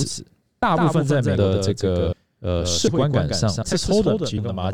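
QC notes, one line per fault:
Throughout: doubled audio track. A second full-band copy of the speech trails the original by about 150 ms, roughly 5 dB quieter, with no decay or room colour. This is likely a second capture through a slower path being mixed in, which gives a hard, slap-like double.
0.63, 1.38, 2.13, 2.88 and 3.63 s: audio missing between chunks. At each point about a third of a second vanishes and the two sides butt straight together, so the speech skips forward every 0.75 s. The likely cause is chunked processing, which fits one-second chunks, dropping audio at each handover.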